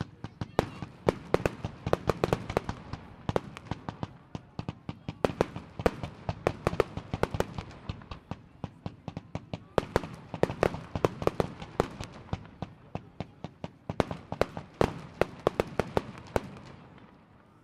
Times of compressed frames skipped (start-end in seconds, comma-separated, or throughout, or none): 4.61-4.65, 8.13-8.18, 11.83